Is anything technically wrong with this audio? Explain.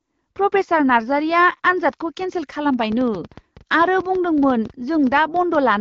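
Yes. A train of clicks runs from 2.74 s to 5.56 s. About twenty clicks arrive at roughly 8.2 per second, spaced unevenly. They peak about 5 dB above the speech. Each click has much the same short, sharp shape. The likely cause is interference from nearby equipment or a faulty connection or power supply injecting repeated pulses. They sound like ticking or popping laid over the speech, and they continue through the pauses. The AMR wideband coding underneath shows only light damage.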